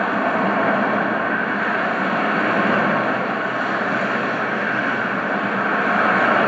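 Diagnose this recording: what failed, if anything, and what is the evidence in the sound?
Nothing in the recording points to a failure at any stage of the chain, and the sounds it carries come across with the signal intact throughout.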